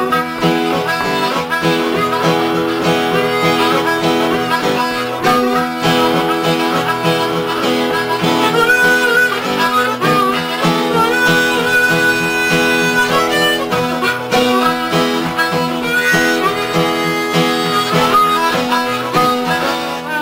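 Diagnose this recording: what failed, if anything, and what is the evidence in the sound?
Nothing failed in this recording, and the sound offers no evidence of a fault at any stage.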